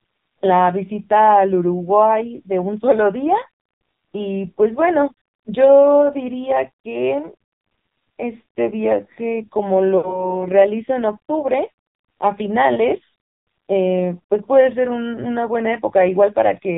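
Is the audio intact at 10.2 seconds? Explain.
No. Lost AMR speech frames affect 9.98 to 10.34 s: the decoder repeats the last good pitch and vocal-tract settings at falling gain, so the speech stretches, then fades toward silence before recovering roughly. The gap is about 60 ms, which fits three 20 ms frames. The AMR narrowband mobile codec also applies here. It passes nothing above 4 kHz and leaves the speech heavily buzzy and synthetic, which fits a low rate near 6 kbps.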